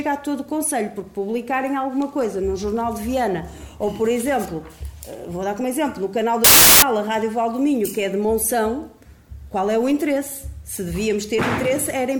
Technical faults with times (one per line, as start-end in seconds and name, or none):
6.44-6.82 wrong sample width